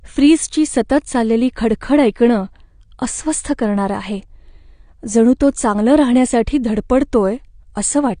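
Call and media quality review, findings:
AAC compression, whole clip: dull, smeared speech with nothing above 9.7 kHz, and plainly audible codec damage, a warbly, fizzy edge on sibilants. Likely an AAC-LC encode, fits around 32 kbps: coarse quantisation of each frame's frequency lines, cut-off pulled down.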